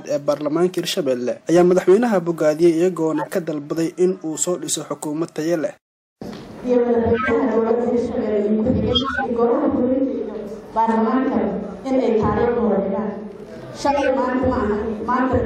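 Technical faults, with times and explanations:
3.16–3.28 s, 7.14–7.31 s, 8.92–9.26 s and 13.87–14.08 s, corrupt frame decoded: frames with flipped bits were played anyway, scattering energy into the wrong frequencies as squeaky noise bursts. On a spectrogram these appear as bright vertical smears a few frames wide. On the waveform they are abrupt spikes.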